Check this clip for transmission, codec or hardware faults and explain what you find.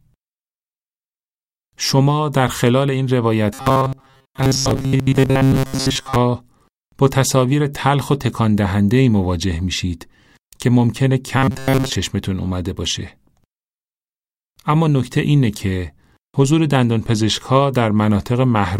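One fault appears twice: robotic sound from repeated short buffers, at 3.54 to 6.16 s and 11.38 to 11.96 s. The likely cause is audio arriving too seldom, so a roughly 7.5 ms chunk loops in place of most real sound. That forces a rigid, metallic 134 Hz buzz onto the speech.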